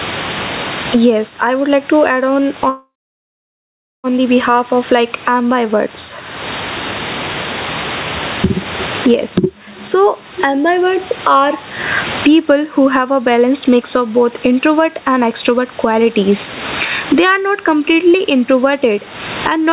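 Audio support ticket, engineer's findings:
Gain pumping, whole clip: loud and soft parts pulled close in level, level swing about 25 dB. Likely input gain set far too high, with a fast limiter clamping every peak. Dynamics squashed.

Call audio freeze, 2.69–4.07 s, right after "like to add on": brief tail of the last sound, then about 1.15 s near-silence. Jitter buffer ran dry, likely delayed packets; playback resumes where it stopped, nothing lost, about 1.35 s added delay.

Jitter buffer speed-up, 18.90–19.72 s: sound runs about 6% fast, pitch unchanged, slightly hurried. Receiver trimming short pitch-period chunks, roughly 70 ms total, to drain excess buffered audio. Band limit at 4 kHz fits a narrowband G.711 path.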